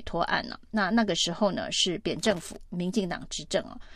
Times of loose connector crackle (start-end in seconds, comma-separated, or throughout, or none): 2.19-2.56